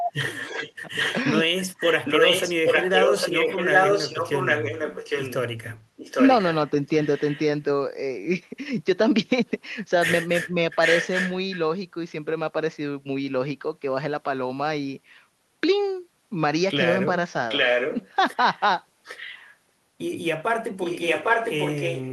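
An echo canceller that likely could not tell its own talker from loudspeaker echo while both sides spoke produces speech suppressed in double talk from 0.00 to 0.14 s, where the speech is pushed down by roughly 30 dB and nearly vanishes.

From 0.39 to 1.22 s, an echo leak appears, likely from a loudspeaker-side canceller letting residual pickup through. A copy of the speech returns about 0.81 s late, around 5 dB below the direct sound. The same delayed echo recurs at roughly equal level from 1.77 to 7.39 s.

At 10.47 to 10.55 s, a second, shallower double-talk suppression dips the speech by only about 5 dB.

The echo leak then recurs, always 0.81 s behind the speech. It is roughly as loud as the speech from 10.81 to 11.56 s and from 17.49 to 18.09 s. From 19.04 to 19.53 s it is fainter, about 15 dB down. From 20.79 s it runs to the end at about full level.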